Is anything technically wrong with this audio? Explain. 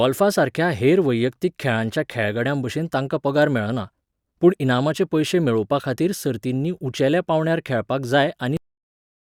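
Yes, there's a cut-off end. Right after "सर्तींनी उंचेल्या पांवड्यार खेळपाक", at about 8.57 s, the speech stops mid-sound and drops straight to digital silence with no natural decay. The final stretch of audio was never written out, so the recording just ends abruptly.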